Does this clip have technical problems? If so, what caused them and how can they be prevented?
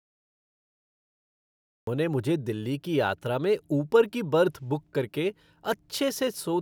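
Yes. The clip has a cut-off start: from 0 to 1.87 s there is pure digital silence, and at 1.87 s the speech appears abruptly mid-sound, with no natural attack or fade-in. The capture or stream began after the talker had already started, so the opening of the utterance was never recorded. A waveform shows a flat line that jumps straight to the speech signal at 1.87 s; a spectrogram shows blank black, then a hard vertical edge of energy. Starting the recorder with pre-roll, or using a pre-trigger buffer, prevents it.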